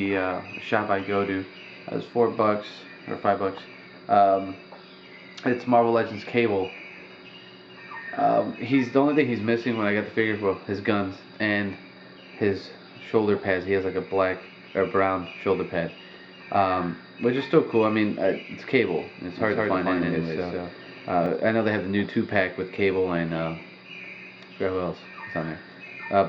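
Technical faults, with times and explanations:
19.3 to 21.26 s, doubled audio track. A second full-band copy of the sound trails about 150 ms behind at about the same level. It has no decay or room colour, and it starts and stops abruptly. The likely cause is a slower second capture path mixed in.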